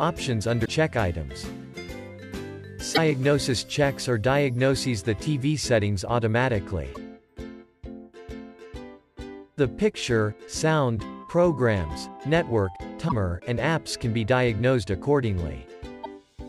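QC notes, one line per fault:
0.62–0.69 s, 2.91–2.98 s, 6.91–6.97 s, 13.05–13.12 s and 16.00–16.06 s: damaged data in a compressed stream. Five short glitches, each roughly 55 to 70 ms long, where corrupted frames made the decoder misread the bitstream and lose sync until it found a valid frame header. On a spectrogram each appears as a brief vertical disruption. The waveform shows a short break in the surrounding envelope.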